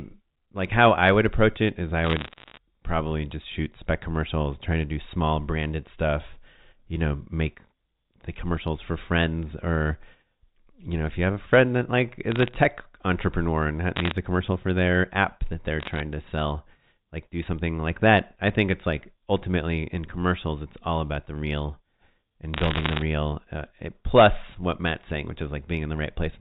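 Bit errors on a digital phone line produce bursts of crackle at 2.04–2.58 s (after "approach it is I"), 12.32–12.54 s (after "a friend that like"), 13.96–14.12 s, 15.80–16.00 s (before "to sell like do") and 22.54–23.02 s. Roughly one bit in a hundred to two hundred fifty is flipped, so single samples jump to wrong values. The waveform shows isolated spikes, and the spectrogram shows thin full-band vertical lines, all capped at the 4 kHz ceiling of the G.711 line.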